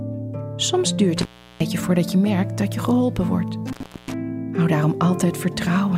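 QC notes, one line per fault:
1.17–1.61 s and 3.67–4.14 s, intermittent contact: twice the sound drops out abruptly, with crackle at the break and again at the reconnection, and each gap leaves roughly 0.35 s of near-silence with only faint hiss underneath. A loose plug or cable conductor is momentarily losing contact. The scraping metal produces the crackly edges, and while the circuit is open, only residual noise from the downstream stage gets through.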